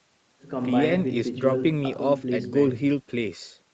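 No technical faults can be heard anywhere in the speech. It carries the sound of a normal call path, with nothing audible above about 8 kHz, which fits wideband Opus coding.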